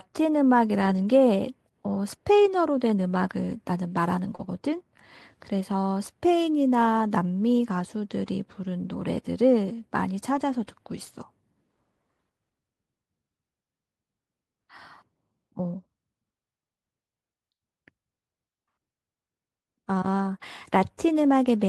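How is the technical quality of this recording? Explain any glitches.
The recording has two overlapping network glitches, both around 4.4 seconds into the speech.

From 4.35 to 4.41 s there is a short concealed packet loss. About 40 ms of audio never arrived in time, and the receiver filled roughly 34 ms by extending the preceding sound before blending back. You hear it as a brief smear or wobble. On a spectrogram, the harmonics or noise stretch flatly, with none of their natural movement.

From 4.39 to 4.49 s comes a lost packet rebuilt from error correction. Here 60 ms was replayed from low-bitrate backup copies carried in the following packets, which fits three 20 ms frames. The result is continuous sound with no gap, but it is rougher and noisier. A spectrogram shows smeared, grainier detail across that stretch.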